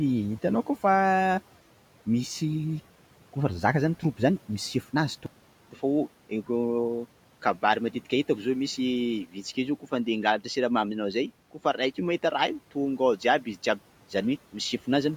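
Input switched to a poorer device, from 5.26 s to the end of the clip: after a 200 ms gap, the speech takes on a duller, boxier tone, with a faint new noise well beneath the speech, though the loudness stays about the same. The likely cause is the system changing its input mid-recording to a different microphone or a headset's call profile, which passes a narrower band and brings its own colouring and noise. The room noise, about 24 dB below the speech, sits under the sound before the switch.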